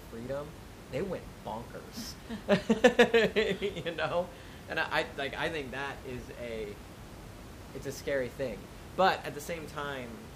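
Nothing goes wrong anywhere in the speech here, and the only thing underneath it is a bit of ordinary room noise sitting about 16 dB below the talking, which is just the space the microphone was in.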